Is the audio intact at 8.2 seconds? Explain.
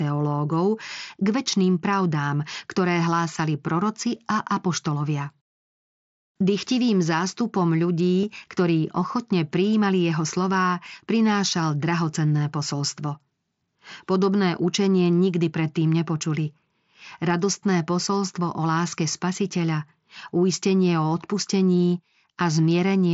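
No. At 8.22 s there is concealed Bluetooth headset packet loss, just before "ktorí ochotne prijímali jeho". About 15 ms of audio went missing between headset and phone, which fits two lost packets. The receiver filled the gap by repeating the best-matching stretch of the waveform just before it. You hear a brief repeated fragment rather than silence, then the real audio resumes. It sits within the wideband mSBC headset sound, which passes speech up to 8 kHz.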